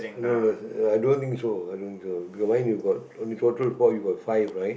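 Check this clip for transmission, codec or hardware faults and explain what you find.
No transmission, codec or hardware faults are present.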